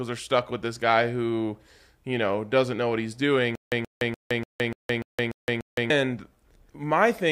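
Right after "doesn't know what he's", from 3.55 to 5.90 s, the speech breaks into a stutter with silent gaps: one 128 ms fragment repeats eight times, each followed by 166 ms of dead silence. The likely cause is a stalled stream replaying its last fragment, and the intended audio is lost.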